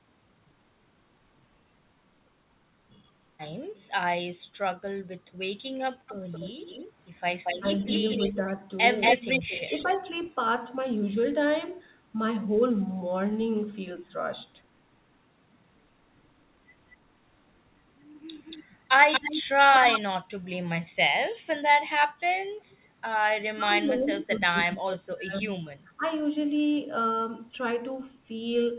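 Speech heard over a narrowband call, with nothing above 4 kHz, which fits a G.711 A-law path. Echo leak appears from 6.07 to 10.3 s and 18.38 to 20.01 s. A delayed copy trails by 231 ms, only about 5 dB down. A faint one follows at 22.7 s, 285 ms late. The likely cause is a loudspeaker echo the far canceller missed. Speech suppressed in double talk shows as brief dips at 7.6 and 8.32 s, of about 10 and 5 dB. A deeper loss of about 25 dB chops the speech between 23.54 and 26.05 s, over about 1.5 s in total, likely during overlapping talk.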